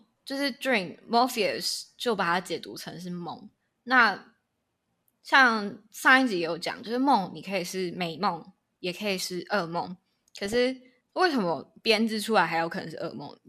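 Weak DAB reception let bit errors slip past the error correction into the MP2 audio data of this speech clip. The result is DAB burbling: corrupted samples put short blips of noise in single sub-bands, and corrupted scale factors make sub-bands jump in level for up to a frame. It shows up as a brief burst of burbling at 4.00 s and a longer stretch of burbling from 10.46 to 10.56 s. Both point to a low error rate of a fraction of a percent across a handful of frames.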